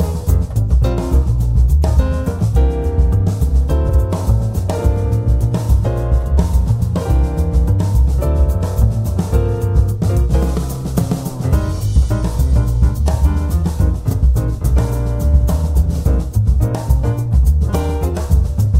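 Frames arrived out of order twice, so neighbouring blocks of about 52 ms at 3.89–4.00 s and about 26 ms at 14.08–14.14 s play with their halves swapped, producing a brief garbled flutter without losing time.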